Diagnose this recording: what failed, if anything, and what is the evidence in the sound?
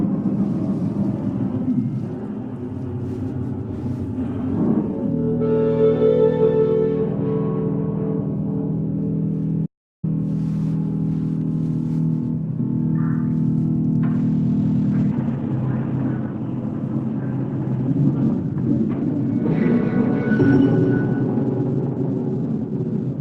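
At 9.66 s the sound cuts out to digital silence and resumes at 10.04 s, a gap of 0.37 s with no room tone at all. This is an audio dropout to silence, likely at the input or driver stage: the source was lost while the recorder kept writing zeros.

From 14.13 s onward the sound turns abruptly worse, with heavier codec artefacts and no gap at the switch. This is an adaptive stream at a lower bitrate, a network-driven codec step-down that fits a drop from roughly 64 to 16 kbit/s Opus.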